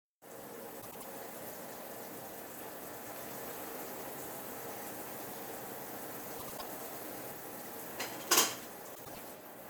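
At 0.81–1.05 s, 6.38–6.62 s and 8.95–9.19 s, frames out of order: two adjacent 96 ms blocks, consistent with runs of four frames, were decoded swapped. Each stretch plays halves exchanged, a garbled flutter, without lost time.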